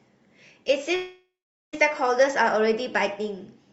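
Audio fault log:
0.95–1.75 s, long network dropout: the speech gives way to a fading buzz carried on from the last sound, then settles to near-silence for roughly 0.44 s before resuming, the lost portion skipped. Likely a gap in arriving packets, concealed then muted, through an Opus call path limited to about 8 kHz.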